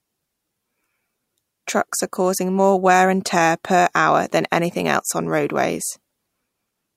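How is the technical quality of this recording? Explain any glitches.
No glitches or technical faults can be heard anywhere in this speech recording. There is nothing in it that needs explaining.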